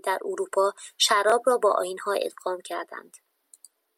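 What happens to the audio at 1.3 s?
At 1.30 to 1.32 s the speech hits a brief Bluetooth stutter. About 21 ms of audio goes missing, consistent with a single dropped or late packet, and the receiver fills the gap by replaying its last buffered slice. That repeated fragment is heard as a short, hard glitch, a single stutter rather than a sustained buzz. Playback then resumes further along, so the skipped 21 ms of material never arrives.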